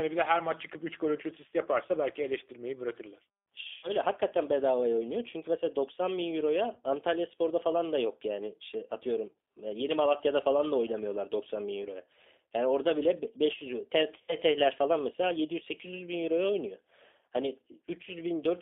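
Throughout, the speech carries G.729 codec damage: a rough, slightly synthetic texture from low-bitrate (likely 8 kbit/s) pulse-based reconstruction. On a spectrogram, energy sits between 300 Hz and 3.6 kHz with nothing above, and harmonics look smeared and grainy.

At 3.77–3.90 s, between "yaparsa belki eleştirmeyi bırakırlar" and "hakikaten bedavaya oynuyor", VoIP packet loss concealed by the speech codec fills a 60 ms gap (two packets) with a fading extension of the previous sound. The spectrogram shows frozen, evenly spaced harmonics. The waveform shows a repeating cycle that shrinks in amplitude. Shorter 30 ms concealments, each fitting one packet, occur at 6.73–6.78 s and 9.33–9.36 s. Another 60 ms one at 14.22–14.37 s, just before "falan mesela", leaves the speech weak briefly after it returns.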